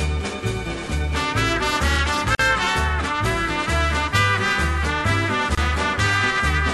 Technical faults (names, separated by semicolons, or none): gap at a join of encoded pieces